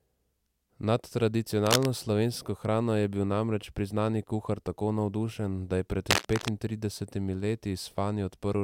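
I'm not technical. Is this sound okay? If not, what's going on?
No. A worn cable or connector was likely being moved, making its electrical contact flicker on and off. That causes cable scratch noise: bursts of scratching, rustling noise about as loud as the speech, from 1.66 to 1.88 seconds and again from 6.10 to 6.50 seconds.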